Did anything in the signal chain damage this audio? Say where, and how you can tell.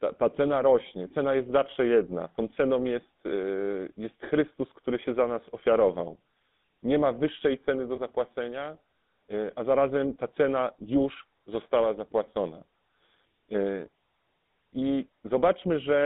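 Yes. The codec stage damaged it. Throughout the speech there is a buzzy, gravelly roughness typical of the GSM full-rate codec. The sound is confined to roughly 200 Hz to 3.6 kHz, with nothing above. That fits 13 kbps full-rate GSM. This codec models the vocal tract and excites it with regularly spaced pulses, keeping only every third excitation sample. That coarse excitation is what makes the speech sound rough and buzzy.

There are also lost GSM frames, at 7.96 to 7.99 s. The speech briefly turns into a rough, metallic ring instead of continuing naturally. The gap is short, which fits a single lost 20 ms frame. The decoder fills a bad frame by repeating the last good frame's settings. That held, repeated frame is what produces the ringing tone.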